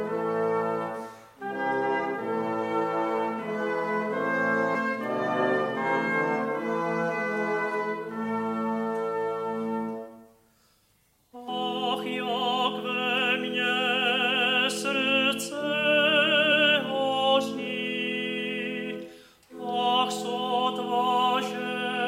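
The audio carries three brief bursts of damaged data in a compressed stream, at 4.74 s, 11.47 s and 16.51 s, each lasting under 20 ms. At each point corrupted bytes make the decoder misread the affected frame and lose sync until it locks onto the next valid header. The result is a short chirp or blip. On a spectrogram each event shows as a thin vertical smear of broadband energy, and on the waveform as a sudden jagged discontinuity.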